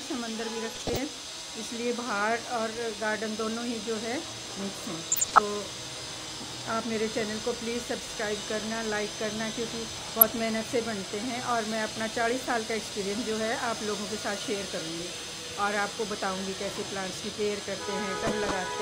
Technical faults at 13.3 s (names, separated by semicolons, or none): none